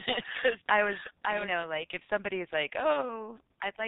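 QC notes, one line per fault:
Throughout: G.723.1 codec. The sound is muffled and hoarse, with nothing audible above 4 kHz and consonants smeared into soft, blunt edges. The damage is heavy because this early internet-telephony codec runs at only 6.3 kbit/s and codes the signal in 30 ms frames, rebuilding it from a coarse voice model that updates slowly. Fast changes and high-frequency detail in the speech are lost between updates.
0.00 to 1.64 s: doubled audio track. A second, full-band copy of the speech trails the original by around half a second, about 5 dB quieter, already running when the clip begins and cutting off abruptly at 1.64 s. It has no reverberant tail or room colouring, so it is not an echo from a space. The likely cause is the same signal arriving twice, once through a slower capture path or a mis-aligned edit.
2.93 to 3.02 s: VoIP packet loss concealed by the speech codec. 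The speech briefly stretches into a sound that sags in level before normal sound resumes, and it stays weak or distorted for a short while after. The decoder had no data for this stretch, which fits a single lost 30 ms frame. It filled the gap by repeating its last pitch and filter with falling gain. Because each frame builds on the previous one, recovery lags.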